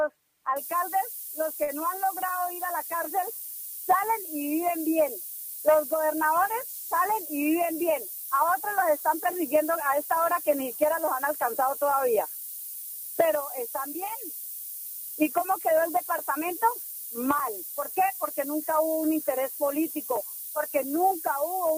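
Low bit depth with noise shaping runs from 0.57 s to the end: a constant, thin hiss climbing steeply toward the top of the band, which points to roughly 5-bit quantisation. The rounding error has been pushed upward in frequency, leaving a noise floor nearly as loud as the signal itself.

A short stall from a late packet occurs between 1.63 and 1.70 s. The jitter buffer ran dry, so the receiver held the last sound for 48 ms until the late data arrived, then resumed where it had stopped. Nothing is lost, but the sound hangs unnaturally with a faint buzz or dip.

A jitter buffer speed-up follows from 15.22 to 15.99 s. With surplus audio queued, the receiver trimmed repeated short pitch-period slices, about 40 ms in total, to shrink the delay. The audio runs 4% fast at unchanged pitch.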